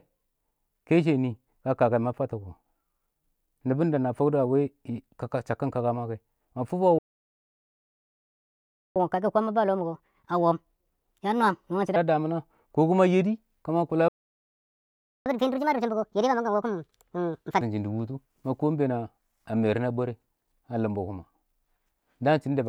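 At 6.98 s the speech just cuts out, a playback stall lasting about 2 s, likely the player starving for data or its thread getting blocked. It picks back up at 8.96 s, and from there to 11.96 s you get catch-up at higher speed: the backlog plays at 1.25x, so everything sounds rushed and lifted around four semitones before settling back to normal.

Same story again at 14.08 s, with a shorter stall of about 1.2 s, likely the same starvation or blocking, ending at 15.26 s. The catch-up that follows is harder, 1.5x until 17.61 s, and the pitch jumps roughly seven semitones.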